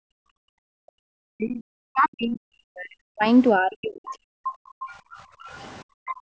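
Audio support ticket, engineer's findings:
Echo canceller gating background noise. Canceller clamping the mic while the far end plays, so room tone drops out. 0 to 0.88 s, drop of about 40 dB. 4.66 to 5.43 s, about 31 dB. 5.84 to 6.34 s, about 40 dB. Each is a hard hole in the ambience that fills back in when suppression releases. The top band stops at 8 kHz, which is expected from the call mic processing.

Speech suppressed in double talk, 1.16 to 4.38 s. Likely cause: both ends talking at once, and the canceller unable to separate the near talker from loudspeaker echo, so it attenuates everything. The near voice is suppressed, with drops as deep as around 40 dB across roughly three seconds.

Other side's voice leaking through, 4.87 to 6.14 s. Likely cause: residual loudspeaker echo the canceller failed to remove from the mic path. A second voice sits underneath, about 20 dB below the talker, and it overlaps the gating at the end of the clip.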